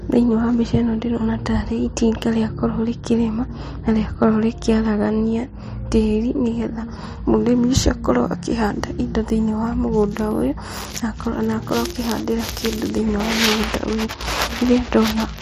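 At 4.23 s, between "itinga rĩakorwo rĩkĩrĩma na" and "rĩkĩaragania tĩri nĩgetha mũrĩmi", a speech peak overdrives about 1 dB past the clipping stage's limit, causing brief hard clipping heard as a crackle.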